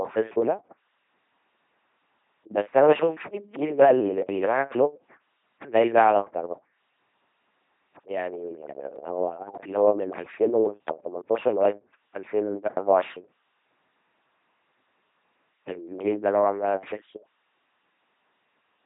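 LPC-10 vocoder damage runs through the whole speech clip, and it is heavy. The speech is rebuilt from a short set of filter settings driven by either a buzzing pulse train or noise, each moment treated as fully voiced or fully unvoiced, so it comes out mechanical and robotic. Nothing survives above 3.8 kHz, and the coarse sound fits a 2.4 kbit/s coder.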